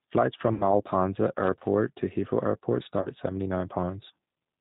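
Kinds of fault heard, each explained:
G.729 codec: speech squeezed to 8 kbit/s and rebuilt from a vocal tract filter, pitch predictor and sparse pulses, so it sounds rough and synthetic. A spectrogram shows nothing above 4 kHz, with smeared, blocky harmonics across the whole clip.
VoIP packet loss concealed by the speech codec: lost packets, about 60 ms of sound at 0.54 s and 30 ms at 3.02 s, were filled by the decoder repeating its last pitch and filter with falling gain. Each gap becomes a brief stretched sound, a buzzy tone or coloured noise, that fades. The waveform shows a decaying stretch.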